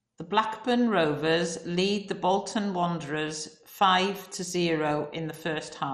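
Right through the speech you get MP2 compression, likely at a low rate near 56 kbps. Starved sub-bands drop out, so there's nothing above 13.9 kHz, and what's left sounds dull, gurgly and grainy.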